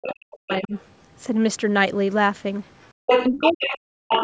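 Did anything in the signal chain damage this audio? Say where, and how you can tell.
Yes. The damage is in the call processing stage, specifically the echo canceller, and it affects the speech in three ways.

Speech suppressed in double talk: from the start to 0.74 s, and again from 3.3 to 4.18 s, the talker's speech sinks sharply, by as much as about 40 dB at its deepest, for roughly 0.7 s each time. Both spans overlap a second voice. The cause is likely an echo canceller that could not tell the near talker from loudspeaker echo while both sides spoke, so it attenuated everything together.

Other side's voice leaking through: a second voice sits under the talker from 0.51 to 0.8 s, about 20 dB down. It flickers faintly, about 40 dB down, at 2.82 to 2.89 s. It then comes through at roughly the talker's own level from 3.06 to 3.66 s and from 4.09 s to the end. The far end's audio was likely reaching the microphone from the loudspeaker and not being fully cancelled, so it passed through as residual echo.

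Background gated by the echo canceller: between 2.93 and 3.02 s the room tone drops out for about a tenth of a second, falling about 37 dB, then returns. It sits between the leaked fragments, when the loudspeaker was active. The canceller's suppressor clamped the microphone hard while it judged far-end sound to be present, then released, leaving a brief hole in the background.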